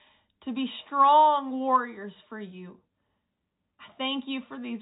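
Nothing in this speech goes wrong at any point, and the only thing worth noting is the ordinary telephone-line character of G.711 coding, with everything above 4 kHz gone, just as a normal phone call would sound.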